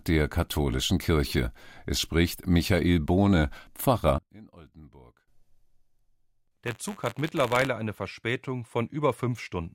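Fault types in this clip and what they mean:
One channel inverted: From 4.18 to 5.28 s the sound collapses by about 26 dB, leaving only a faint residue. The likely cause is one stereo channel with reversed polarity, so the shared content cancels when the channels are summed to mono.
Buffer tearing: From 6.64 to 7.68 s a robotic buzz at 93.8 Hz rides on the sound. Writer and reader of the ring buffer have drifted, so each period splices in a small sliver of audio about 30 ms old. The rate fits a 512-sample buffer.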